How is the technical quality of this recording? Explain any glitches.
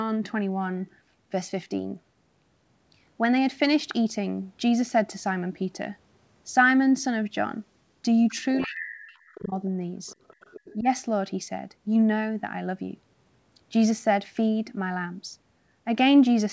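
The recording has two echo-canceller problems clustered between about 8.3 and 10.9 s. Throughout, the band stops at 8 kHz, which fits a G.722 wideband call path.

Other side's voice leaking through occurs at 8.28–8.33, 8.56–8.71, 9.15–9.48 and 10.07–10.75 s. Faint foreign speech sits under the talker, roughly 20 to 30 dB below it. The likely cause is loudspeaker sound reaching the microphone that the canceller didn't fully subtract. On a spectrogram these appear as weak, fragmented harmonic traces that don't line up with the main voice.

Speech suppressed in double talk affects two spans. From 8.64 to 9.53 s the talker's level drops, by as much as about 40 dB, for around 0.7 s in total. At 10.80–10.87 s there is a shallower dip of about 10 dB. This is likely the canceller turning everything down while both sides spoke together. The waveform shows sudden envelope holes, and the spectrogram shows the voice bands fading or vanishing in patches.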